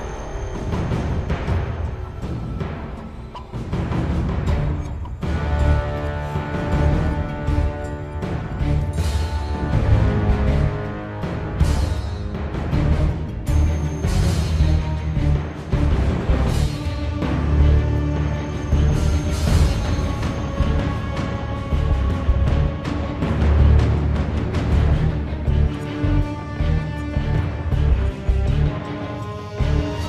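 Nothing in this one gives me anything to flag, since the audio simply runs its course without a single technical hiccup worth pointing to.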